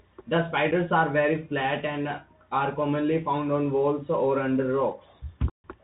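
Bluetooth CVSD headset codec damage runs through the whole speech clip. The sound fits a 64 kbps CVSD link, where one bit per sample steers an adaptive step up or down, so nothing above 4 kHz survives, loud bright sounds outrun the step and distort, sibilants turn scratchy, and a granular hiss sits beneath. Unconcealed Bluetooth headset packet loss opens a tiny abrupt hole at 0.71 s and a much longer gap of 142.5 ms from 5.50 to 5.64 s, which points to about twenty lost packets. Each time the lost audio is replaced by silence or an idle pattern with hard edges rather than being smoothed over.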